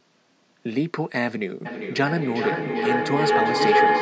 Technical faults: feedback howl

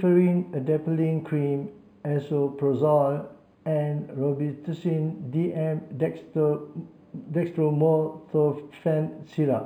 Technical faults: imaging from linear upsampling

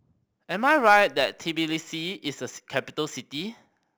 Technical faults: crude rate conversion

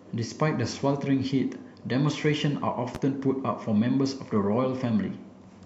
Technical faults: loud pop

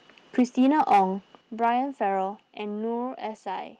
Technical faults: microphone overload; microphone volume stepped down

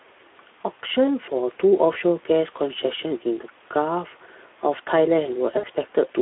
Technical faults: Speex codec; VoIP packet loss concealed by the speech codec

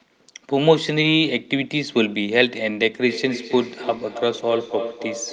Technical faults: feedback echo between two devices

